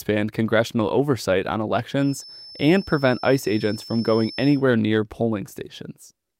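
From 1.95 to 4.65 s there's a feedback whistle, a thin steady 5.3 kHz tone roughly 20 dB under the sound, likely a speaker-to-mic loop hovering at the edge.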